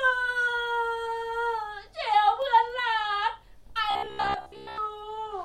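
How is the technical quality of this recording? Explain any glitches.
Two kinds of glitch affect the recording: isolated clicks and a stretch of robotic buzzing.

At 2.42 s and again at 4.34 s there are single sharp clicks from dropped samples, likely a handful of missing samples making the waveform jump abruptly.

From 3.91 s to 4.78 s the speech turns into a rigid metallic buzz near 66.7 Hz. This is robotic sound from repeated short buffers, likely caused by roughly 15 ms chunks being replayed while most of the real audio is skipped.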